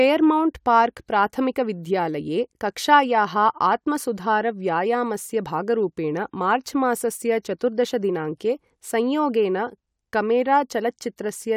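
No technical faults can be heard anywhere in this speech recording. Nothing in the audio calls for a timestamp or further comment.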